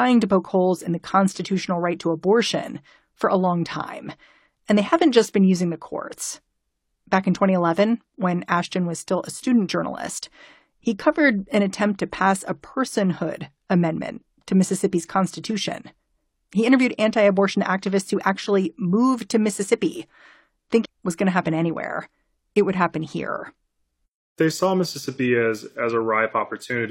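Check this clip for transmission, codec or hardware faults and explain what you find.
One transmission fault is present, a stream segment skipped, between 20.81 and 20.86 s, just before "was going to happen". The speech jumps forward abruptly with a brief blip at the splice, and a stretch of the programme is simply absent rather than muted. The likely cause is one segment of the segmented stream failing to load, so the player dropped it and carried on with the next, losing a second or more of content.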